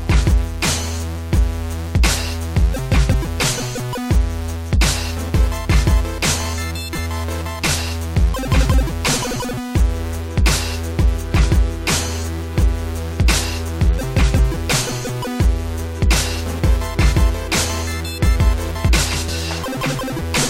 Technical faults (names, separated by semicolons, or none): compressed frames skipped